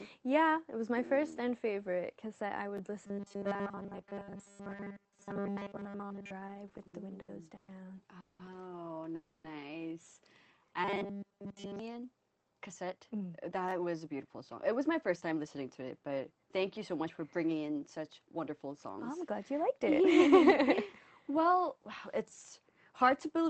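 Chunks out of order appear at 2.77–2.80 s and 13.69–13.72 s: a short slice of audio, around 11 ms long, plays one chunk late in the first case and two chunks late in the second, so the order scrambles briefly at hard joins without anything being lost. Robotic sound from repeated short buffers runs from 3.07 to 6.32 s and again from 10.84 to 11.79 s, where most of the audio becomes a rigid, metallic 200 Hz buzz that only loosely tracks the underlying sound, likely because a roughly 5 ms buffer is being replayed while fresh audio arrives too seldom. Repeated stalls (stutter) fill 6.47–7.70 s with 11 small gaps, the longest 120 ms, about 330 ms in all or roughly a quarter of that stretch, each covered by continuing the last sound until late packets catch up, so the audio drags and stutters with nothing missing. Call audio freezes hit at 8.20–8.41 s, about 190 ms, and 9.15–9.46 s, about 290 ms: the last sound is stretched into a fading hold rather than silence, likely because packets were held up and the jitter buffer ran dry, and the audio then resumes where it stopped, pushing everything later. 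A jitter buffer slow-down at 10.41–10.65 s inserts about 37 ms by repeating short pitch-period pieces, so that stretch plays at 87% speed with pitch unchanged and sounds drawn out. A jitter buffer speed-up from 12.35 to 15.47 s trims short pitch-period pieces to shed around 0.4 s of delay, running at 112% speed with pitch intact and sounding hurried. Underneath all of this, the call codec's coding noise and a high-frequency cutoff near 8 kHz can be heard.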